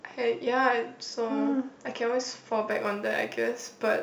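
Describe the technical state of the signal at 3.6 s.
At 3.6 s the speech sits inside a stretch of crude rate conversion running from 2.71 s to the end of the clip. Samples have been dropped to the nearest position with no anti-aliasing filter, in a repeating pattern that fits a 48 kHz to 44.1 kHz conversion. The resulting error, roughly 30 dB below the signal, forms shifted, inharmonic copies of the speech and is heard as a gritty, inharmonic fizz that tracks the louder and brighter sounds.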